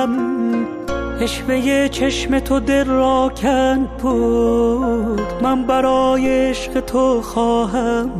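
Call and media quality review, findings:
DC step at 6.26 s: single low thump. Waveform baseline jumps about -18 dBFS, then bleeds off through a 5 Hz high-pass. Probable ADC recalibration or offset-carrying input switched in. Program audio continues through the step.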